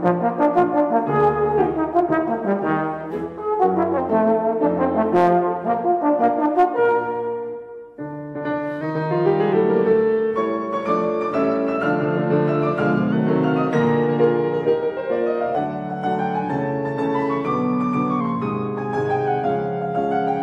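At 3.11 to 3.98 s, 8.81 to 9.53 s and 13.12 to 15.55 s the sound jumps about 6.25% fast, pitch rising roughly a semitone (105 cents), then snaps back. From 18.21 s to the end it goes the other way, 6.25% slow and 112 cents flat. That's a drift correction step, likely from clock-matching software stepping the playback rate to refill or drain its buffer. It comes across as a sudden detune with a matching tempo change.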